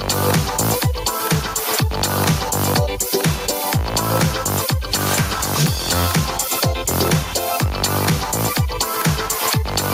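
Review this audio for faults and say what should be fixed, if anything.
Gain pumping of around 10 dB runs throughout; likely the input gain is set far too high, so a fast limiter keeps clamping down. Lower the input gain at the microphone stage so the limiter rarely engages.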